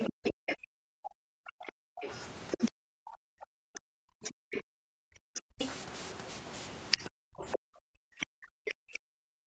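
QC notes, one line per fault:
0.00–0.55 s, 2.52–2.57 s, 4.55 s to end: other side's voice leaking through. A faint second voice, roughly 30 to 40 dB under the speech, is audible, likely far-end loudspeaker echo the canceller left in.
2.76–5.59 s and 7.33 s to end: background gated by the echo canceller. Room sound drops by about 40 dB, around a second in total in the first span, then recovers as suppression releases.
8.00–8.11 s: speech suppressed in double talk. The talker's voice dips roughly 40 dB for about a tenth of a second while the far end is also audible, likely the canceller turning down both sides during double talk.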